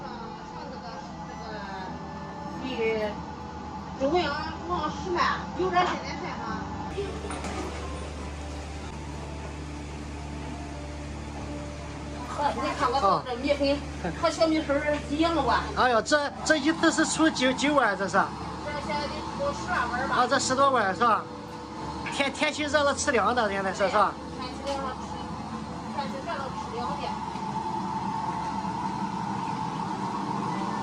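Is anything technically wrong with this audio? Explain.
No, nothing technically wrong can be heard anywhere in this audio, and the signal stays steady and intact throughout.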